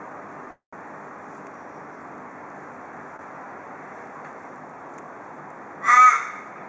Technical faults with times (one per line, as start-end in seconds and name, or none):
0.51-0.74 call audio freeze
3.16-3.21 short stall from a late packet